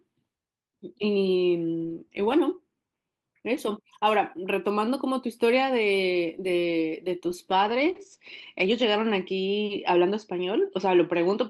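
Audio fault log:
7.52 to 11.50 s, call bitrate drop: the estimated bandwidth fell and the encoder was forced onto far fewer bits, which fits a drop from 32 to 14 kbps; speech turns coarse and rough, and its top end shrinks from 20 kHz to 8 kHz, sounding muffled.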